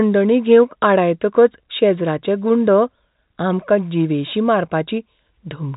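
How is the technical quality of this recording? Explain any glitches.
No glitches can be heard in this speech recording. It carries the narrow sound of G.711 telephone coding, with nothing above about 3.8 kHz.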